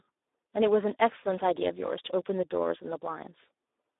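Throughout, the speech sounds hoarse, buzzy and thin, with nothing above 3.8 kHz: heavy Speex codec damage, its starved excitation fitting a low setting near 8 kbps.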